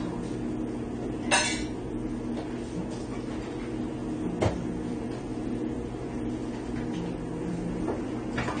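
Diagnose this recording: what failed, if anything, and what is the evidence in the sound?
The fault sits at the codec stage. Throughout, nothing is heard above 9 kHz. The audio is dull and smeared, with plainly audible warbling or fizzy damage. The likely cause is AAC compression, AAC-LC at a rate that fits 32 kbps. Coarse quantisation starved the spectrum and pulled the cut-off down.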